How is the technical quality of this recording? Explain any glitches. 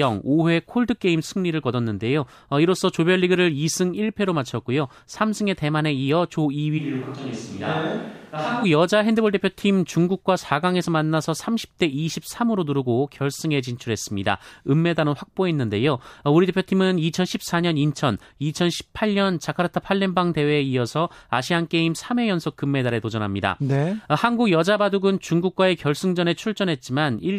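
The recording has one clear glitch, a brief switch to a distant microphone. From 6.80 to 8.62 s the close microphone's signal likely drops out of the mix and a pickup much further away stands in. With the mouth far from the capsule, the room's reflections and ambient noise carry more weight. The speech abruptly turns hollow and roomy, thinner in the bass, and about 5 dB quieter. Background noise rises to roughly 25 dB below the speech. The sound snaps back just as suddenly at 8.62 s.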